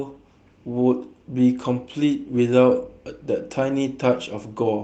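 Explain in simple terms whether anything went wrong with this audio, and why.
Nothing went wrong here; it's an ordinary call recording.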